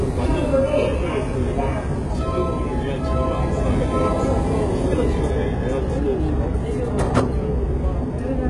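Throughout, the top end sounds bright but gritty and metallic, with nothing above 11.4 kHz, pointing to heavy HE-AAC compression, likely at a very low bitrate near 12 kbps.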